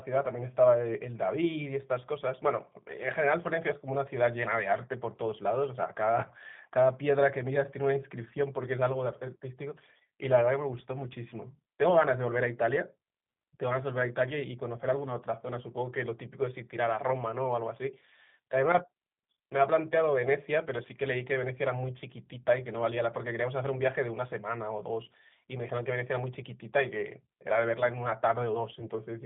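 Throughout, the G.729 codec at 8 kbit/s narrows the band to about 150 Hz to 3.6 kHz and rebuilds speech from a model, giving a plainly rough, synthetic timbre. From 28.80 to 28.87 s, VoIP packet loss concealed by the speech codec briefly stretches the sound as the decoder extrapolates from the last frame, in a short disturbance that fits a single lost 10 ms frame.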